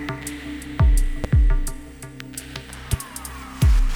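Two loud pops break into the sound, one at 1.24 to 1.27 s and another at 2.93 to 2.96 s. Each is a single sharp hit, around 10 dB above the sound, which keeps going underneath. They're likely voltage spikes from a switch, plug or static discharge.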